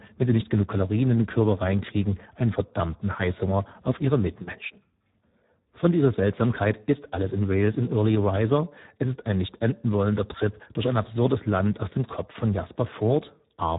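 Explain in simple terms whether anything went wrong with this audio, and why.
Heavy Speex codec damage throughout makes the speech sound noisy and hoarse, not merely muffled like a plain phone line. Nothing is heard above 3.8 kHz.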